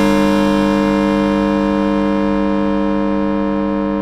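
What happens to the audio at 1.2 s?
At 1.2 s the doubled audio track is present, as it is across the whole clip: each sound is followed by a full-band copy about 150 ms later at roughly equal loudness, with no decay or room colour. This is likely a second capture through a slower path or an edit holding two copies out of step.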